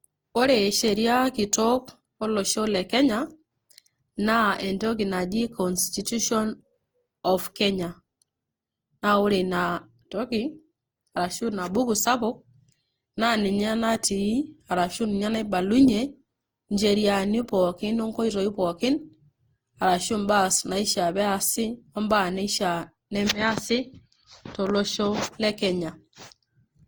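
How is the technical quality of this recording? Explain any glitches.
The recording is compromised throughout by a swirling, hollow coloration that sits on the speech from start to finish, most likely generation loss. The texture fits a lossy codec in the Opus family at around 48 kbit/s, with the audio decoded and re-encoded about five times. Each pass quantises on a shifted frame grid, so spectral holes and noise stack up, consonant attacks smear, and the sound is more watery than one encode at that rate would produce. The band still reaches about 20.2 kHz, which separates it from a single low-bitrate pass that would usually cut the top off.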